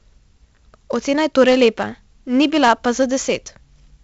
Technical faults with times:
0.00-4.03 4-bit ADPCM compression

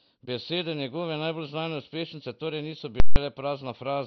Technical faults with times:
0.00-4.06 MP2 compression
3.00-3.16 invalid numbers at full scale

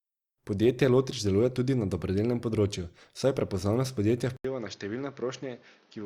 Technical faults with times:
4.37-6.05 input switched to a poorer device

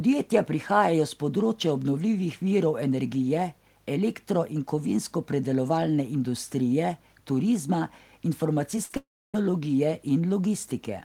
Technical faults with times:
8.76-8.97 repeated packet loss (robotic sound)
8.97-9.35 long network dropout

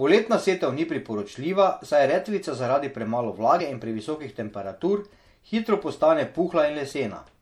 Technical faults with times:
0.00-7.41 MP3 compression
3.57-3.61 damaged data in a compressed stream
6.89-6.93 damaged data in a compressed stream

